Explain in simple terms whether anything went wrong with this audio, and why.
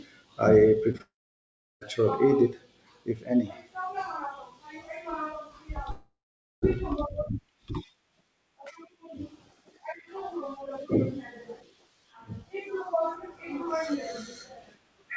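Two kinds of network trouble affect this speech recording, both near the start or middle.

Short concealed packet loss: twice in quick succession, around 0.92 to 0.96 seconds and again around 0.98 to 1.02 seconds, a little piece of the call (about 20 milliseconds each time) arrived too late to be played. The receiving end patched each gap by stretching the sound that came just before it, so you hear a tiny smear or wobble rather than a clean cut.

Long network dropout: right after those two glitches, from about 1.02 to 1.83 seconds, the connection likely stopped delivering audio altogether. The receiver kept the last sound going briefly as a fading buzz or hiss, then fell silent for about 0.7 seconds before the speech resumed, with that stretch simply missing. The same thing happens from about 5.91 to 6.78 seconds: a short fading fill, then roughly half a second of silence, and the lost part never comes back.

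All of this came through an ordinary internet-call connection, which is why the sound lacks the highest treble, with nothing above 8 kHz.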